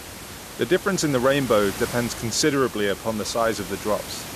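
No faults are audible in the speech; the only thing under it is room noise sitting about 13 dB below the talker, which belongs to the recording space rather than the system.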